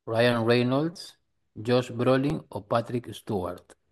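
At 0.94 to 0.96 s a repeated buffer shows up: with no fresh audio ready, one tiny slice of about 5 ms plays five times over, giving a brief buzz. The waveform shows identical 5 ms cycles with hard joins, a vertical streak on the spectrogram. A single-repeat click follows at 2.30 s.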